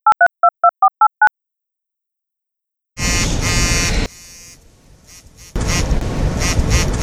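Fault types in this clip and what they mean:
One channel inverted: from 4.06 to 5.56 s the sound drops by about 26 dB, leaving only a faint residue of the audio. The likely cause is one stereo channel with reversed polarity, so everything common to both channels cancels when they are summed to mono.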